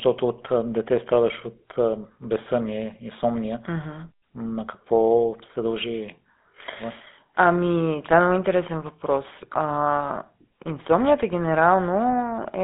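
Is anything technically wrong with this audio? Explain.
Yes. Throughout the speech, voices carry a buzzy, gravelly roughness, and nothing above about 3.8 kHz comes through. This is GSM full-rate codec damage, consistent with 13 kbps coding: the vocal tract is modelled and driven by coarsely spaced pulses, within a 150 Hz to 3.6 kHz phone band.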